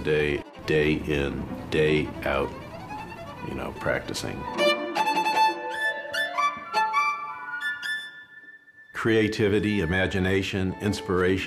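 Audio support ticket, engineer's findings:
No audible faults found; nothing to escalate.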